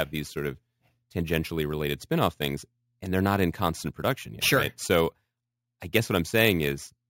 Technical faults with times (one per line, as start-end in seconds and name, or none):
0.00-7.09 imaging from sample-and-hold upsampling